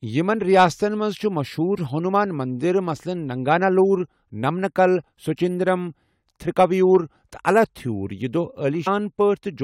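The clip is speech, and it has one fault: compressed frames skipped, at 8.86 s. The sound jumps forward at that point. Roughly 150 ms of audio is simply missing, which points to about seven whole frames of around 23 ms each being dropped. These frames were either absent from the file or rejected by the decoder as damaged.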